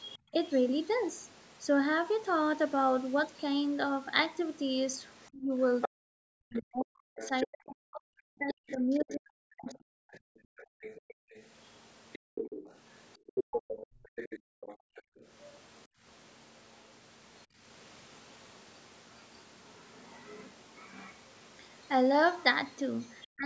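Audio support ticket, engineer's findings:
Other side's voice leaking through: faint second voice at 0.0–0.18 s, 5.22–21.15 s and 23.11–23.27 s, roughly 15–25 dB under the talker. Likely residual loudspeaker echo the canceller missed.

Speech suppressed in double talk: the talker's own voice dips by up to about 40 dB across 5.31–10.09 s and again at 23.34–23.45 s. This is likely the canceller attenuating both sides during overlap. It differs from gating because the voice itself drops, not just the room.

Background gated by the echo canceller: room tone ducks by up to about 40 dB in brief spots between 10.39 and 17.58 s, around 1.5 s in total, then recovers. Only the background drops, not the voice. Call processing band-limits everything to 8 kHz.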